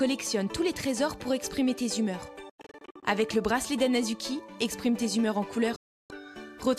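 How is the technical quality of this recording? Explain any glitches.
The recording has two digital broadcast dropouts. From 2.50 to 3.03 s, the receiver muted in several short holes totalling about 290 ms, the longest 96 ms. From 5.76 to 6.10 s, a single 336 ms gap. Both fade out in about 3 ms. Corrupted or missing frames are muted rather than played, so that audio is lost.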